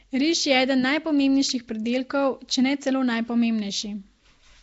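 Across the whole speech clip there is a rough, hissy halo, a smeared underwater quality and nothing above 7.7 kHz, likely from Nellymoser compression at a low bitrate around 32 kbps. At 1.49 s, just before "pridelkov če ne celo", a sharp snap sits on top of the sound, likely the mark of an electrical switching spike picked up by the audio line.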